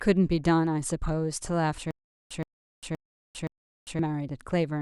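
The playback likely stalled from 1.91 s to 3.99 s, replaying its last fragment at each retry before running dry, which produces a stutter with silent gaps. A burst of speech about 122 ms long repeats 4 times, each followed by roughly 399 ms of dead digital silence, so the same snippet recurs every 521 ms at a steady pace. The speech that belonged in that stretch is missing entirely.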